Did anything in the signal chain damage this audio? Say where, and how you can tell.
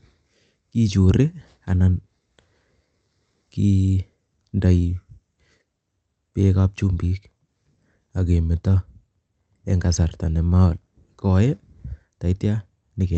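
No, nothing in the signal chain damaged this speech.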